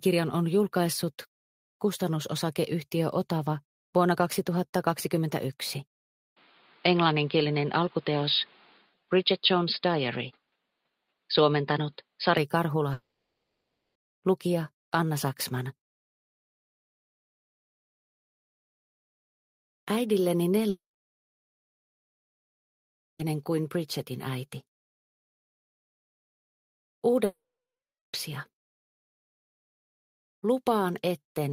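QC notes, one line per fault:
6.37–12.37 s, input switched to a poorer device: the band narrows, with no gap at the switch and no real level change, and a new noise floor about 30 dB below the signal appears. It is likely a change of microphone or headset profile. On a spectrogram the upper band is missing across the whole section.
8.84–9.11 s, sound cut by the noise suppressor: within that window, roughly 200 ms of sound is pulled down by as much as about 17 dB, because the suppressor judged it to be noise. On the waveform the envelope sags briefly, and the spectrogram shows a faded patch.
12.93–13.97 s, 20.69–23.21 s, 27.25–28.15 s, long network dropouts: the audio is lost for about 1.02 s, 2.5 s and 0.88 s, with playback resuming later and those stretches missing. The likely cause is packets failing to arrive. The receiver extends the last sound as a fading buzz or hiss, followed by silence lasting about 120 ms, 2.41 s and 740 ms. 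A spectrogram shows smeared tails fading into blank columns, and the waveform goes flat.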